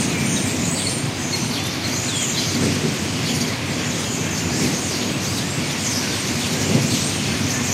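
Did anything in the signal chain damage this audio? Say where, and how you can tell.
No, nothing in the chain audibly damaged this audio.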